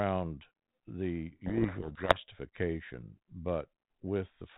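A codec payload misread runs from 1.46 to 2.17 s. The speech travels as G.726 ADPCM at 32 kbit/s, limited to the telephone band below 4 kHz, and in this stretch the two ends disagree on the bit order of the G.726 code words. The decoder rebuilds each sample from a wrong difference value, so for those 0.71 s the speech is buried under harsh, grinding distortion. Normal decoding returns at 2.17 s.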